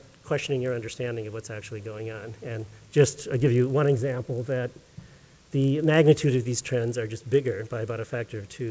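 A steady buzz at 50 Hz runs under the audio for its whole length, rising and falling with the signal level. It is the mark of a resampler restarted on every block: the 24 kHz to 16 kHz conversion was run on 20 ms chunks independently, so each chunk edge was filtered against missing neighbouring samples, leaving a small discontinuity fifty times a second.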